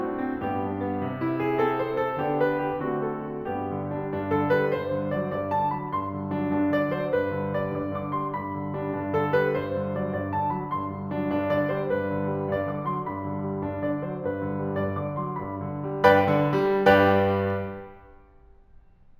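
Throughout the music there is imaging from linear upsampling. The rate was raised by joining samples with straight lines, a poor interpolation filter. The sound fits a 16 kHz source brought up to 48 kHz. The top of the original band sounds dulled. A faint mirrored copy of the spectrum sits between 8 kHz and 16 kHz, roughly 40 dB below the music. It adds a light metallic shimmer to bright, high material.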